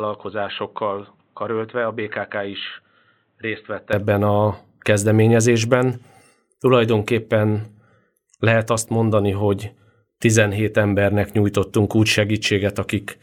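From the start to 3.93 s, the speech is dull and boxy, with nothing above 4.1 kHz. It is also about 10 dB quieter and carries a noise floor roughly 40 dB below the speech. At 3.93 s, just before "a kezdeményezésben", full bandwidth and level return at once, with no gap. This is an input switched to a poorer device. The opening was likely captured on a narrower-band microphone or headset profile before the system changed back.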